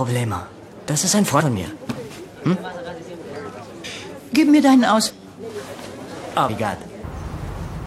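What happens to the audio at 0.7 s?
Nothing goes wrong at 0.7 s; the audio plays through that moment intact, with no dropout, click or distortion to be heard.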